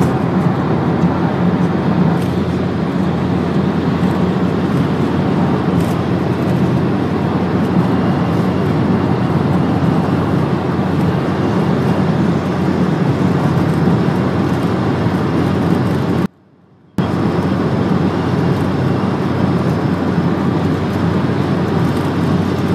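At 16.26 s there's an audio dropout to a faint residue lasting about 0.73 s, until 16.98 s. The sound cuts abruptly to a faint trace roughly 30 dB down, then snaps back. That's likely a brief signal loss with the path after the break still live.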